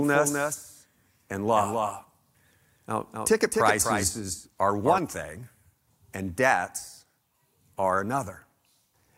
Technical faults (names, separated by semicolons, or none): doubled audio track